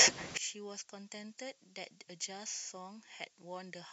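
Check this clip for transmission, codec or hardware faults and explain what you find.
One fault is present. From 0.37 s to the end, the speech drops by about 34 dB when summed to mono, likely from one channel inverted; the identical channels cancel, leaving a faint residue.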